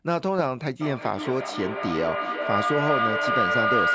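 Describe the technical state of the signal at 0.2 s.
At 0.2 s the signal is intact, with no fault present, and the speech shows only the ordinary effects of call microphone processing: the lowest bass is trimmed and nothing reaches above 8 kHz.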